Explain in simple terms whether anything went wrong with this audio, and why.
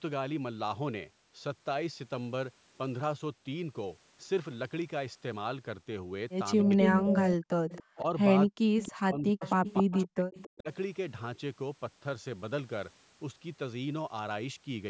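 From 6.63 to 7.33 s, and again from 7.97 to 10.69 s, the speech dips and partly cuts out, mildly in the first stretch and almost to silence in the second. This is speech suppressed in double talk, likely because both sides spoke at once and the call's echo canceller turned everything down.

Over roughly the same stretches, 6.65 to 7.98 s and 8.79 to 10.62 s, a repeat of the speech follows about 0.28 seconds behind. It is fairly strong at first and quieter later. This is echo leak, likely sound from a loudspeaker getting back into the microphone without being fully removed.

At 7.61 to 7.67 s the room sound drops out completely for a brief moment, then returns. This is background gated by the echo canceller: while the loudspeaker was playing, the canceller clamped the microphone shut for an instant.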